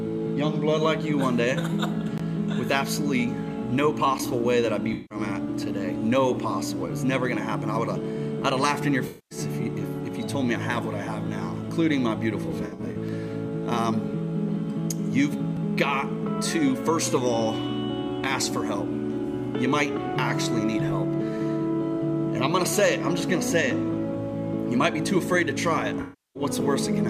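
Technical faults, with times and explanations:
4.93–5.18 s, 9.07–9.38 s, 12.44–12.96 s, 26.01–26.43 s: AAC frame loss with concealment. Coded frames go missing, about 0.17, 0.23, 0.28 and 0.34 s in total. The decoder rebuilds each gap from the last good spectrum, so the audio smears. At 12.44 s the losses are scattered, in short bursts.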